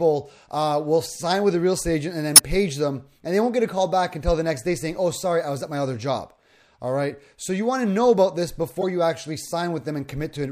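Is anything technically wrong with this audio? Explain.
Yes: a corrupt frame decoded at 2.36–2.39 s and 8.81–8.84 s. Damaged compressed frames were played anyway, spraying misplaced energy into brief chirps, squeaks, blips or noise bursts. On a spectrogram they appear as short smears; the first is the louder of the two.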